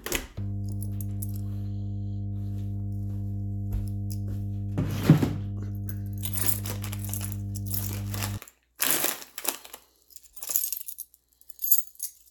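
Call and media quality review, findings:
Mains hum, 0.38 to 8.38 s. Steady 50 Hz tone with low harmonics, loud, close to the level of the sound. Ground loop or nearby transformer coupling the power line into the signal.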